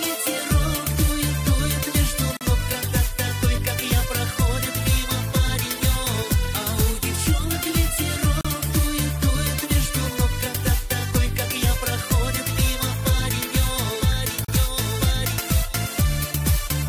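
At 2.37 s the sound drops out for about 41 ms, then again at 8.41 s and 14.45 s for about 37 ms each, exactly 6 s apart. That spacing is the giveaway for a gap at a join of encoded pieces: the audio was encoded in 6-second chunks and stitched back together untrimmed, so each chunk's start-up delay and padded final frame leave a short hole. The edges are smeared by the codec, and the sound resumes right where it left off.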